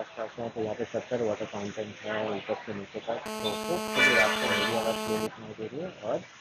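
GSM phone buzz runs from 3.26 s to 5.27 s, a hard, raspy tone at about 217 Hz carrying a dense stack of harmonics that has nothing to do with the sound underneath it. A nearby 2G handset on a call is transmitting in bursts at that rate, and the audio circuitry rectifies each radio pulse into a click. Because the call keeps the bursts regular, the buzz holds steady for those two seconds, sitting only about 2 dB below the programme level.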